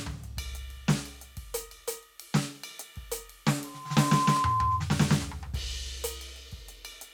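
At 3.64 s a loudspeaker feedback squeal begins in the music. A microphone is picking up the speaker it feeds, and the loop gain passes one at 1 kHz. The tone swells over about half a second to roughly 5 dB above the music, then stops at 4.86 s.

Two sharp clicks occur, at 4.37 s, during the squeal, and at 5.69 s. Each is a single thin tick with no gap in the sound. The likely cause is dropped samples: the waveform jumps forward after losing something like a tenth of a millisecond.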